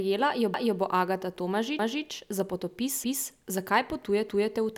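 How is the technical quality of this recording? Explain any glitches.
The recording has a recurring glitch from overlapping chunks. At 0.54–0.79 s, 1.79–2.04 s, 3.04–3.29 s and 4.29–4.54 s, a 250 ms stretch of the speech plays a second time. The audio was handled in 1 s chunks, each starting a quarter-second before the previous one ended, so the joins repeat at a steady 1.25 s spacing. It sounds like a stutter. Unlike dropouts or skips, nothing goes missing; material is duplicated.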